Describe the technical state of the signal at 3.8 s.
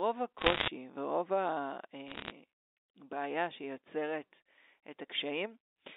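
At 3.8 s the speech is intact, carried over a normal telephone-band channel that stops short of 4 kHz, with no fault audible at that moment.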